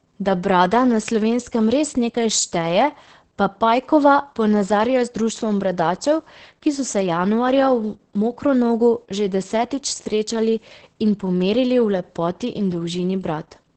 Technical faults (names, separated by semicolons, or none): Opus voice compression